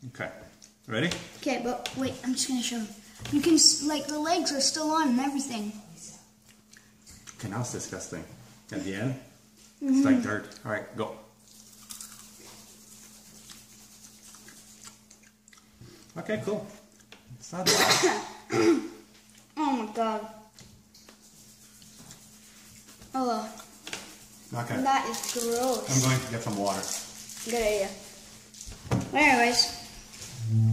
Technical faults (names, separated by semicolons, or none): none